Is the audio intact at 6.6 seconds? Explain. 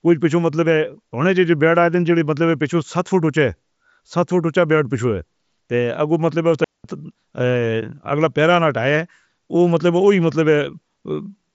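No. At 6.64 s a digital wireless dropout begins and lasts until 6.84 s, a 200 ms gap. The receiver stopped getting enough valid data from the radio link and muted its output rather than play corrupted audio, so the speech falls into a clean hole of near silence. There is no crackle or noise burst on either side, and the signal resumes abruptly, still band-limited to about 7.7 kHz by the mSBC headset path.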